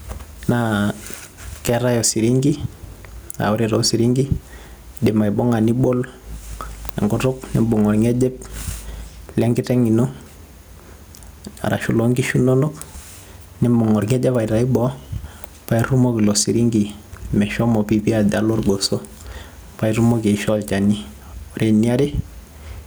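Gain pumping runs through the whole speech recording. The input gain was likely set far too high, so a fast limiter or compressor clamps down each time the talker gets loud and releases again in every pause. The level swings by around 10 dB. The speech itself sounds squashed, with loud and quiet moments pressed toward one flat level.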